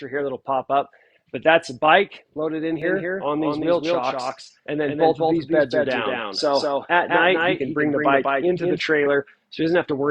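A second copy of the audio, likely from a slower capture path or an edit holding two copies out of step, is mixed in from 2.82 s to 8.80 s. This doubled audio track trails by around 200 ms at roughly 5 dB quieter, a dry full-band echo that appears and vanishes abruptly.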